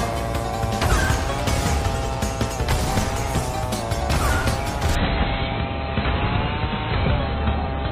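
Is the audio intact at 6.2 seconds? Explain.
No. From 4.95 s to the end at 7.91 s, the adaptive stream dropped to a lower bitrate, which fits a fall from about 96 to 16 kbit/s AAC. The switch is abrupt and gapless, leaving nothing above 4.2 kHz and adding audible codec artefacts.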